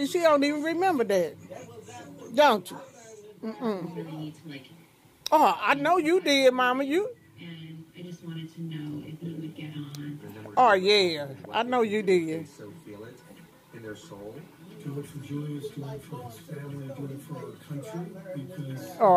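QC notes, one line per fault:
No faults were found in this clip on review.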